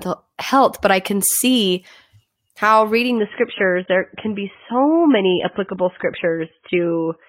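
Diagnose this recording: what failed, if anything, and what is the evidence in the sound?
At 3.18 s the speech abruptly turns dull, with nothing above 3.8 kHz through to the end and no gap. This is the adaptive stream switching to a lower bitrate at the codec stage, consistent with AAC dropping from roughly 96 kbit/s to about 16 kbit/s.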